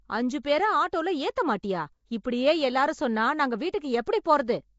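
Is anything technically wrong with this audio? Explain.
Yes. Throughout the speech there is a rough, hissy halo and a smeared, underwater quality, with nothing above 7.7 kHz. This is likely Nellymoser compression at about 32 kbps: empty bands are filled with noise, which separates it from steady background hiss. Pre-echo occurs at 2.24 s and 4.24 s, where a brief hiss of 14 and 19 ms comes just before a sharp attack and softens it. Block-spread quantisation noise leaks ahead of the onset, and that timing distinguishes it from a click or an after-ring.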